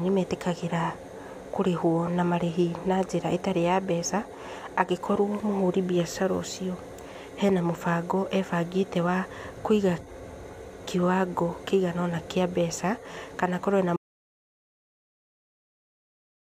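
At 13.97 s the speech cuts to dead silence through the end, an audio dropout to silence, likely lost input. The waveform flatlines and the spectrogram goes blank.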